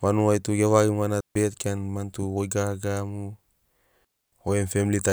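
It's a speech clip with two digital wireless dropouts: the sound cuts to a clean, near-silent hole from 1.21 to 1.35 s (about 150 ms) and again from 4.05 to 4.32 s (about 280 ms). No noise burst on either edge, so the receiver lost the data and quickly muted.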